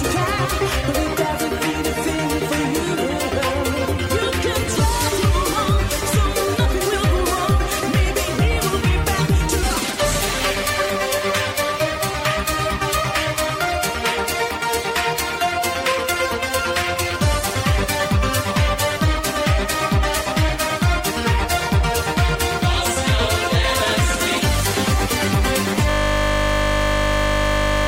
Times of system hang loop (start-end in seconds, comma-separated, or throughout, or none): 25.90-27.87